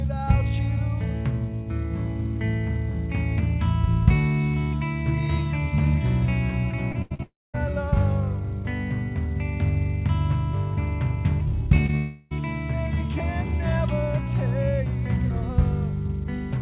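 From 6.92 to 7.58 s there is repeated packet loss with robotic sound. Four gaps, the longest 84 ms, were patched by extending the last sound. The result is choppy, with pieces missing.

Inside that stretch, from 7.23 to 7.56 s, the audio smears into a fading buzz and then about 220 ms of silence. This is likely a long network dropout, with about 320 ms never played.

Short concealed packet loss follows at 11.76–11.80, 11.86–11.91 and 11.91–11.95 s. Each hole of about 20 ms was bridged from the preceding sound. Each is a brief smear or wobble.

From 11.97 to 12.33 s, about 340 ms is replaced by a continued, blurred version of the earlier sound, with no silence. The cause is likely another long network dropout.

Throughout, the call codec passes nothing above 4 kHz, which fits a G.711 path.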